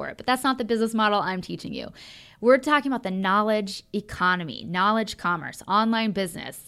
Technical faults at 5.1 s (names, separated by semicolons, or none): none